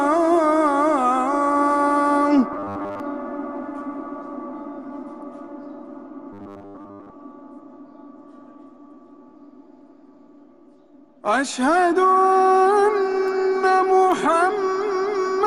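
Robotic sound from repeated short buffers at 2.53–3.00 s and 6.33–7.11 s: a rigid 100 Hz buzz, likely from roughly 10 ms chunks looping over most of the audio, showing as evenly spaced harmonic stripes and a periodic waveform.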